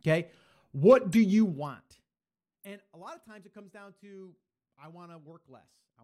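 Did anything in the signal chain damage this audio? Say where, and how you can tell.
Yes. At the codec stage, corrupt frames were decoded: short glitches at 1.12–1.15 s and 2.64 s put stray energy at wrong frequencies, unlike a dropout, which leaves a gap.

Zipper noise from 1.37 to 2.16 s: a gain stage stepped a roughly 20 dB fade in 1 dB jumps, about 30 per second, ticking audibly where a proper fade glides.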